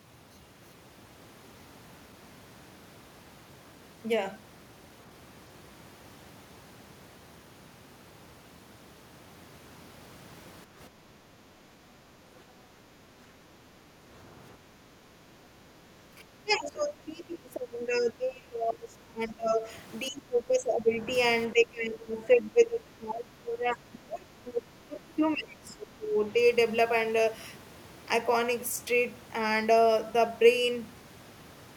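From 10.66 to 13.01 s and again from 14.66 to 15.87 s, the room sound is pulled down by about 7 dB and about 6 dB. This is background gated by the echo canceller, which turns the microphone down while the far end plays.

Between 16.15 and 26.17 s the talker's speech dips repeatedly, at 16.15–16.24, 16.44–19.67, 20.05–21.1, 21.5–24.35 and 24.8–26.17 s. The drops range from slight to around 20–25 dB and sound like speech suppressed in double talk, likely because the canceller mistook overlapping speech for echo.

From 24.45 to 24.62 s a second voice can be heard just below the talker's level, probably the other side's voice leaking through, where echo cancellation left residual loudspeaker sound in the microphone signal.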